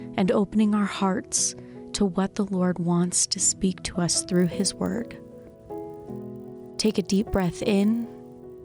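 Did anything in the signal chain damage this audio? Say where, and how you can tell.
Yes: from 4.32 s to the end, a resampler restarted on every block leaves a 50 Hz buzz. Each 20 ms block, apparently converted 24 to 48 kHz, is resampled alone, leaving edge errors.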